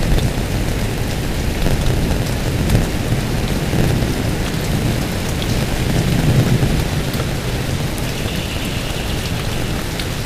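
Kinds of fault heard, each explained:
Block size mismatch (padded): one stage in the chain delivers blocks that are shorter than the next stage reads, and the leftover part of every block is filled with zeros, so a brief silent gap is inserted into each one. Those gaps repeat at about 91.9 Hz for the whole clip and are heard as a steady buzz under the sound. The audio also runs slow, at 0.919 of its normal speed, while its pitch stays about where it should be.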